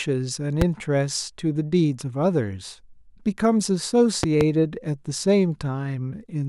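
A loud pop appears at 0.62 to 0.64 s: a single sharp thump standing roughly 15 dB above the speech, which carries on underneath. A second loud pop event at 4.23 to 4.43 s is a pair of pops in quick succession at a similar level. Each is likely a sudden voltage step or pulse, from a plug, switch, static discharge or driver glitch, entering the signal path, where the following circuitry shapes it into a brief, punchy transient.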